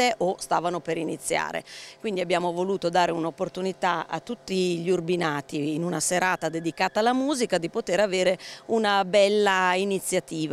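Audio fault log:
No technical faults detected.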